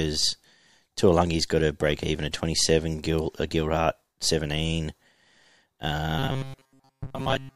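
From 6.19 s to the end at 7.56 s, the speech turns into a rigid metallic buzz at 134 Hz: robotic sound from repeated short buffers, likely a starved stream looping roughly 7.5 ms chunks for most of the span. A spectrogram shows flat harmonic stripes every 134 Hz; the waveform repeats identical short cycles.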